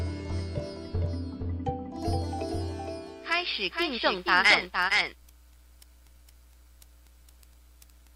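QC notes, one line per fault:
Throughout, doubled audio track: a full-band copy trails about half a second behind, roughly 5 dB down, likely from a slower second capture or an offset edit.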